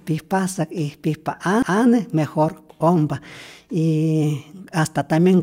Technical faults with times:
1.62 CD skip

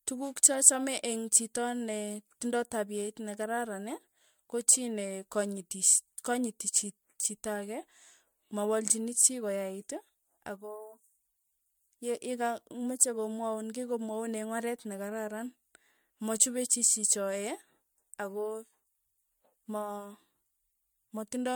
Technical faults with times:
0.00-21.55 generation loss

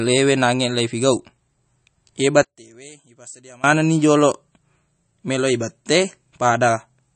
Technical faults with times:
0.00-7.16 MP3 compression
2.43-3.64 one channel inverted

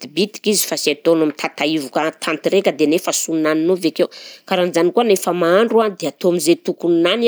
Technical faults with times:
none

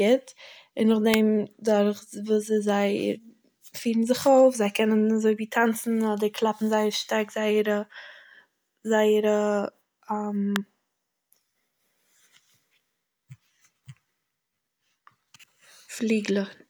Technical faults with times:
1.14 electrical switching spike
10.56 electrical switching spike

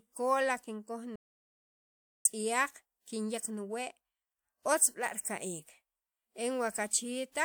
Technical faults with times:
1.16-2.25 audio dropout to silence

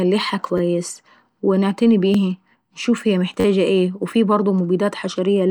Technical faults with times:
0.58-0.60 repeated buffer
2.14 repeated buffer
3.40-3.45 repeated buffer

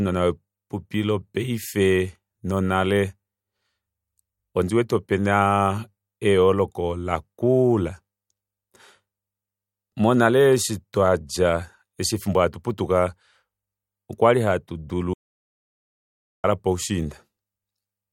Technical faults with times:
15.14-16.44 audio dropout to silence

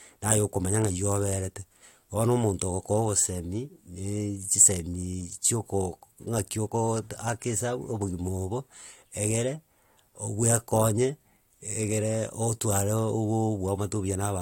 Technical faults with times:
none

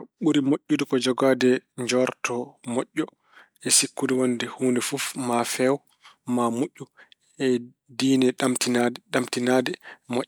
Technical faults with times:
none

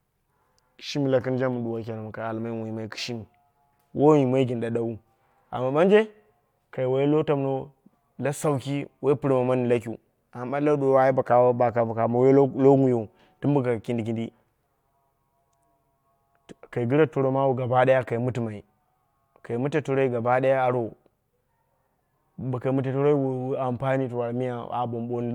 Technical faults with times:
none

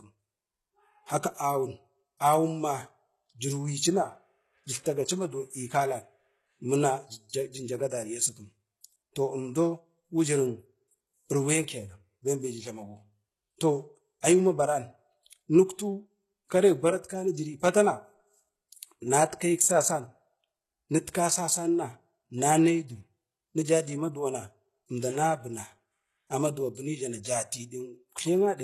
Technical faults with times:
0.00-28.63 HE-AAC compression
7.90 pre-echo

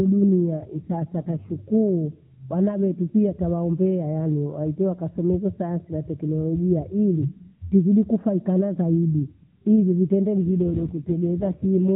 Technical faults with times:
0.49-1.52 AMR rate drop
10.42-11.90 AMR rate drop

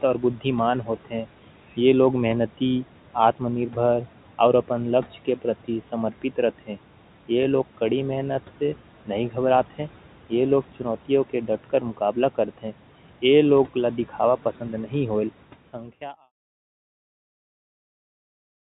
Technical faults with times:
0.00-18.76 noise suppressor artifacts
0.20-0.45 speech cut by the noise suppressor
0.83-1.26 speech cut by the noise suppressor
11.48-12.16 speech cut by the noise suppressor

